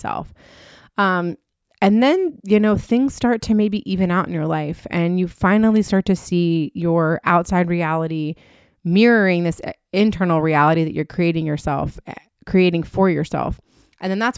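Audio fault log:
No faults detected in this speech recording.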